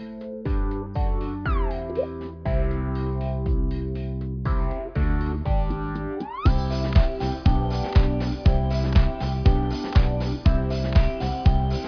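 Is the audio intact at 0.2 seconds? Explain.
Yes, the audio is intact at 0.2 seconds, with no fault at that moment.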